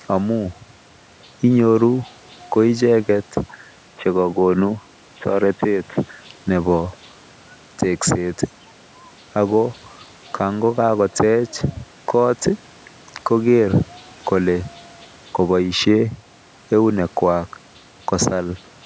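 From 3.77 to 6.24 s the speech goes dull and boxy, with nothing above 3.8 kHz, then opens up again, with no gap and little level change. That's likely an input switched to a poorer device, whose faint noise sits far below the speech.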